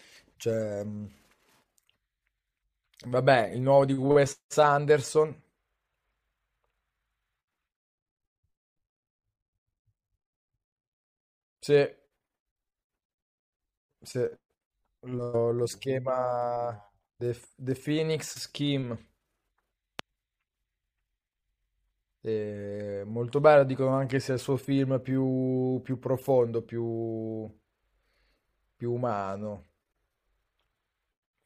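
At 4.49 s a brief hiss of about 19 ms smears in just before a sharp attack, about 20 dB above the quiet it fills. This pre-echo comes from block-transform coding: the quantisation noise for the loud attack spreads across a roughly 26 ms window, which suggests the encoder never switched to short blocks.

From 19.99 to 20.01 s a single loud pop jumps well above the surrounding level while the speech continues underneath. It is likely caused by a sudden voltage step, from a plug, switch, static discharge or driver glitch, added to the signal.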